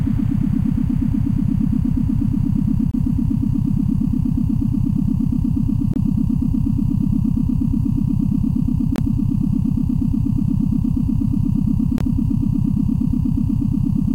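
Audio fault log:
2.91–2.94, 5.94–5.96, 8.96–8.98 and 11.98–12.01 s, gap between chunks: the sound drops out for about 23 ms every 3 s, where chunks were joined with silence between them. Nothing is lost, just pushed later at each join.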